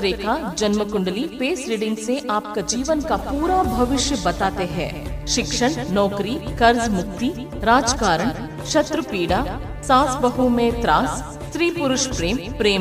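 No technical faults can be heard anywhere in this audio. There is nothing here that needs a time mark or an explanation.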